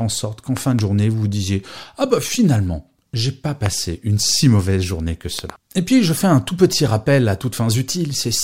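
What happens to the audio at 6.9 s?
Nothing goes wrong at 6.9 s: the speech carries on intact through that moment, with no dropout, click, glitch or other fault.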